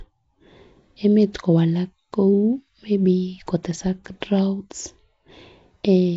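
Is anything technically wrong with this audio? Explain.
Yes, the whole speech clip sounds like it went through Nellymoser compression. There's a rough, hissy halo and smeared underwater quality, with nothing above 7.7 kHz. That's likely the Flash-era codec filling starved bands with noise, consistent with around 32 kbps.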